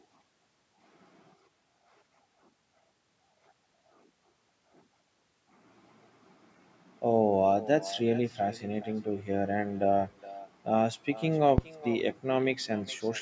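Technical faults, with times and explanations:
Throughout, echo with no canceller: every phrase comes back roughly 0.4 s later as a quieter, thinner copy, about 17 dB down. The far end is playing the call over a loudspeaker, its microphone catches it, and nothing strips it out before it returns.
11.58 to 11.70 s, phantom power thump: a deep low thump that dies away fast, in about 26 ms. A supply was switched on or off on a live input, and that voltage step went straight through the coupling capacitors into the signal.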